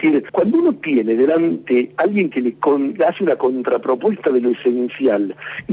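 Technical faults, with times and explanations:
No technical faults are audible anywhere in the audio.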